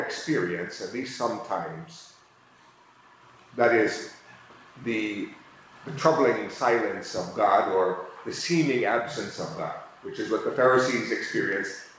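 Nothing goes wrong anywhere in this one; it just sounds like a normal call, with the top end stopping at about 8 kHz the way a wideband call codec leaves it.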